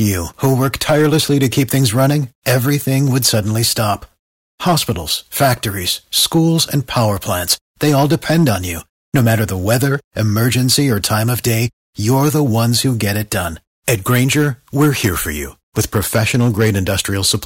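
Right from the start and all the way through, the speech has hard clipping. The signal is being pushed about 7 dB past what some stage in the chain can pass, so the loudest peaks get sliced flat. Only a small share of the samples, around two percent, actually hit the ceiling. You hear it as a gritty crackle on the louder syllables, where those squared-off tops throw extra harmonics up into the high end.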